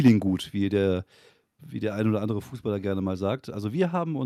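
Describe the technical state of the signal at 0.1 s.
Microphone overload runs from 0.06 to 0.10 s. The peaks push about 5 dB past the converter's limit, and roughly a sixth of the samples there are flattened. This is likely because the input gain was set too high for the converter, and it puts a harsh, crackly edge on the sound.

Microphone volume stepped down at 0.08 s, in the middle of that distortion. The level of both the speech and the background falls abruptly by about 3 dB, likely because the call software detected clipping and cut the device's input gain in a single step.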